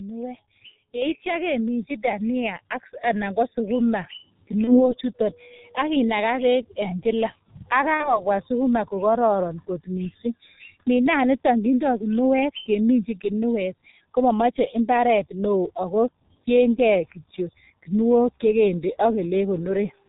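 G.723.1 codec damage runs through the whole recording. The speech sounds muffled and hoarse, with nothing above 4 kHz and consonants smeared together. That heavy degradation fits the 6.3 kbit/s mode, where each 30 ms frame carries only a coarse, slowly updated model of the voice. Fast transitions get averaged away, leaving a rough, band-limited speech signal.

VoIP packet loss concealed by the speech codec appears from 4.64 to 4.95 s. A brief gap is bridged by a stretched continuation of the preceding sound that fades out. The decoder repeats its last pitch and spectral envelope at falling gain. The dropout points to one 30 ms frame lost, but the voice stays weak for about 0.3 s while the decoder's state recovers.

A second concealed loss follows from 7.94 to 8.23 s, right after "kila ak" and before "sukuma ko kororon kot". The smeared fill-in lasts longer here, consistent with two consecutive frames, about 60 ms, going missing. 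The weakened, distorted sound again persists well past the gap itself.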